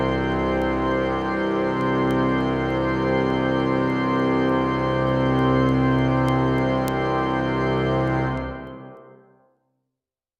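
Word clock ticks run from 0.32 s to 10.16 s: around thirty sharp clicks of uneven strength at a steady rate of about one every 0.3 s. The receiving device is reading a digital link on its own clock rather than locking to the sender's. The two clocks drift apart by roughly 70 parts per million. Each time they slip past one another, a single sample is dropped or repeated, and the resulting discontinuity in the waveform produces a tick against the sound.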